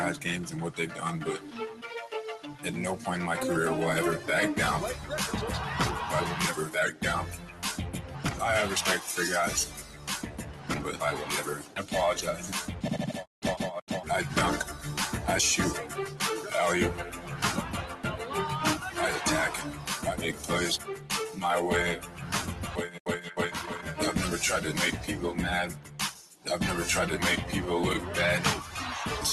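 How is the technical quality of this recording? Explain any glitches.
The recording is marred by a speech-style noise suppressor working on non-speech sound, producing an unsteady level and repeated dips. It travelled over a call link, and its top end stops near 12 kHz.

Noise suppressor applied to music or sounds: Throughout, a suppressor built for speech treats sustained tones, ambience and reverb as noise, so held material swings by around 5 dB while attacks pass. Unlike a compressor's pumping, the movement follows steadiness rather than loudness, giving a fluttering, thinned texture.

Sound cut by the noise suppressor: At 1.39–1.84 s, 6.92–8.25 s, 9.68–12.48 s, 17.16–17.35 s, 19.71–21.1 s, 21.99–23.31 s and 25.74–26.46 s, the suppressor pushes sustained or decaying sound down, by about 9 dB at worst. Tails shorten and held sound sinks. Unlike packet loss, there are no gaps or clicks.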